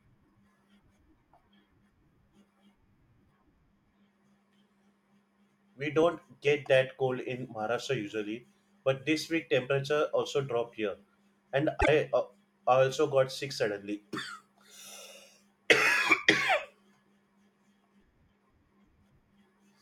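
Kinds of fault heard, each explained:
Frames out of order, 11.80 to 11.89 s: between "also dropped here and" and "uh I also got", two neighbouring single frames, each fitting a 24 ms block, play swapped, giving a brief garbled flutter and no lost time.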